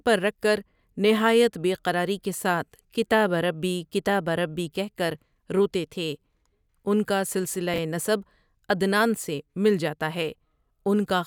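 A speech clip with one case of chunks out of order at about 7.74 to 7.78 s, between "ان کا سلسلہ" and "نسب عدنان سے مل". A 20 ms chunk plays one chunk late, swapping two adjacent slices. It's heard as a brief jumbled moment. The waveform shows hard discontinuities at the three joins, and the spectrogram shows thin vertical broadband lines there.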